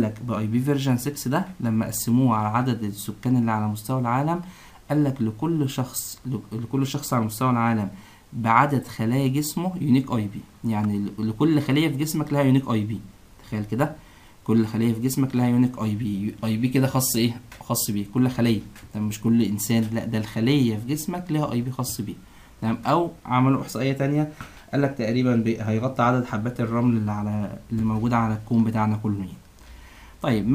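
At 10.84 s a sharp snap sits on top of the sound, an electrical switching spike peaking around -25 dBFS. It is most likely brief arcing from a nearby switch, motor or static discharge coupling into the audio line, heard as a sharp snap.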